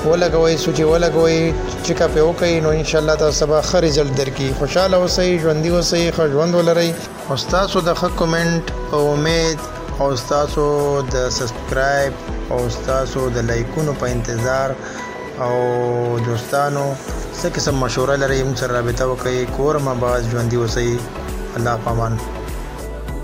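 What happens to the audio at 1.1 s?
Nothing goes wrong at 1.1 s; the audio plays through that moment intact, with no dropout, glitch or distortion.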